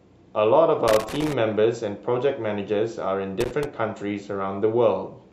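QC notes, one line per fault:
0.88–1.33 s: loose connector crackle. An irregular burst of scratching breaks into the speech. A worn contact is making and breaking rapidly, chopping the signal.
3.41–3.65 s: loose connector crackle again, shorter. The same intermittent contact chops the audio into ragged crackle.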